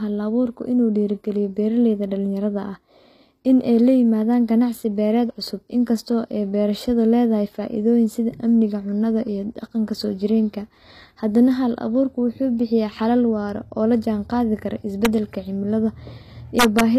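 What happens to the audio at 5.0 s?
At 5.0 s, as throughout the speech, the likely cause is HE-AAC compression. The treble is rebuilt by copying lower bands upward, so s sounds come out gritty and lispy, with nothing above 14.9 kHz. The plainly audible damage fits a bitrate near 24 kbps.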